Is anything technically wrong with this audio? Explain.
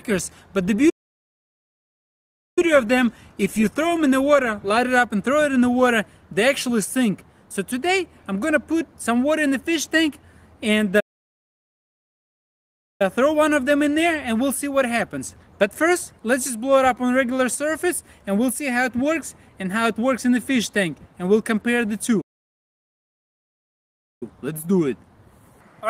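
Yes. Playback stalls occur at 0.89–2.59 s, 11.00–13.02 s and 22.21–24.23 s, silencing the audio for about 1.7, 2.0 and 2.0 s, likely from a starved buffer. Each shows as a flat waveform gap and an empty spectrogram band.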